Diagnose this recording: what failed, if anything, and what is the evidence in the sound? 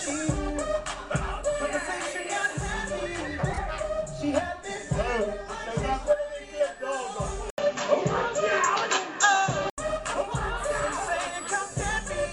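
At 3.52 s a short stutter occurs: one block of about 26 ms plays twice more before the sound moves on, ending at 3.59 s and lengthening the audio by 52 ms. These are repeated frames, written or sent more than once in the codec's storage or network path. The decoder faithfully replays identical compressed data, so the same fraction of a second is heard again as a stutter. A buffer underrun would insert silence or smear, not an exact, frame-sized echo.

From 7.50 to 9.78 s the sound changes character. After a gap of 80 ms, everything above 7.6 kHz is gone, the level shifts by around 5 dB, and a new, faint noise floor sits well beneath the signal. The cause is likely an input switched to a poorer device at the driver level, a different microphone or a headset profile. A simple low-pass filter or a codec bandwidth change would not bring the silence, the level step and the new background together, nor end as abruptly at 9.78 s.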